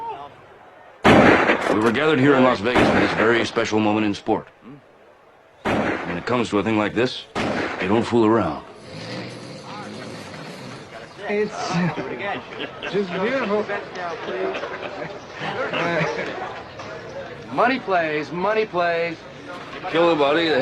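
No technical faults can be heard anywhere in the audio. Nothing breaks into the sound at any point, and it carries on without interruption from the first moment to the last.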